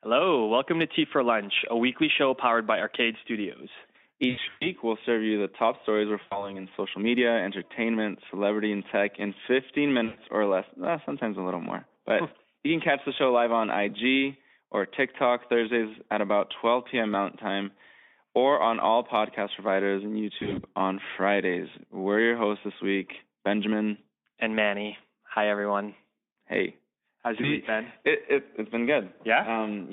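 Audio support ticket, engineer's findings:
Buzzy, stretched tones fading into coloured noise, with weak, smeared sound trailing each gap. Heard at 4.29–4.67 s (about 220 ms lost across 320 ms, longest run 120 ms), 6.21–6.59 s (100 ms), 10.05–10.18 s (120 ms), 20.39–20.66 s (140 ms scattered over 240 ms) and 27.41–27.50 s (20 ms). Component: VoIP packet loss concealed by the speech codec. The decoder extends its last pitch and filter with falling gain and needs a short time to rebuild its state once packets return. The Speex narrowband line, about 200 Hz to 3.6 kHz, carries the sound between gaps.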